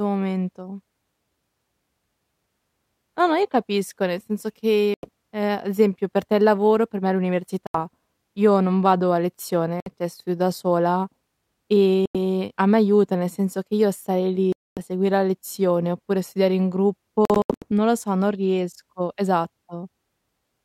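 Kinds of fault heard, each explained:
Bluetooth dropout: audio packets likely missed their delivery deadline to the headphones and were discarded, so the speech drops to silence in abrupt holes of 61 to 91 ms, a 0.24 s gap at 14.53 s, and broken-up stretches around 17.3 s, resuming as though it had kept playing.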